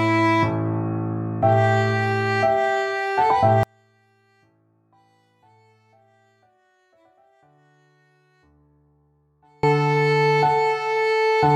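From 3.63 s to 9.63 s the sound collapses to a faint residue, about 39 dB down, and returns at full level afterwards. The likely cause is one channel inverted: with one side's polarity flipped, everything common to both channels cancels when they are combined, leaving only their small differences. This sets it apart from a dropout or gain cut. The sound doesn't go silent or shrink evenly, it drops to a faint remnant of the mismatch between channels.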